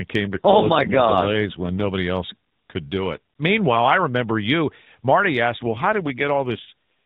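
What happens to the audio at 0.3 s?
At 0.31 s the voice turns rougher, buzzier and more synthetic, with no gap and no loss of bandwidth, until 1.92 s. This is an AMR rate drop: the codec briefly spent fewer bits per frame, which fits a step from 12.2 to 5.9 kbps.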